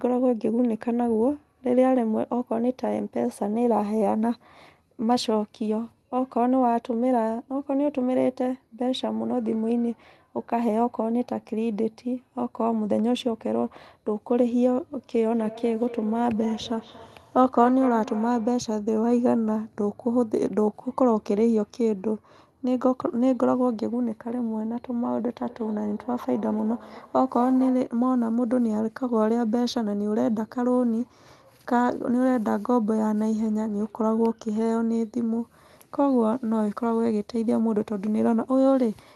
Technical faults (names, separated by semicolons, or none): feedback echo between two devices